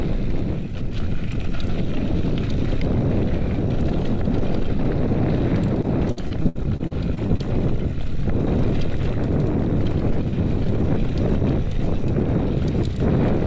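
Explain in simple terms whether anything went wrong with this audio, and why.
Between 5.82 and 7.41 s there's repeated packet loss (robotic sound): 11 small dropouts, the longest about 61 ms, each papered over by stretching the last bit of sound. About a fifth of that stretch is filled in, so it turns choppy with pieces missing.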